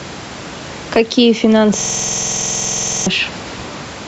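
The clip is speech. Throughout, the gain swings by roughly 10 dB. This is gain pumping. The likely cause is input gain set far too high, with a fast limiter pulling it down on every peak. Loud and soft parts sit close in level, and the sound feels squashed. From 1.81 s to 3.07 s there is a system hang loop. One 46 ms slice of audio repeats exactly, about 27 times. At 21.5 repeats per second, it sounds like a machine-gun stutter. The sound card kept cycling its ring buffer while the computer froze. The loop length fits a 2048-sample buffer. About a second and a half of real audio is lost. The room noise sits about 30 dB below the speech, and the call processing leaves nothing above 8 kHz; both are normal.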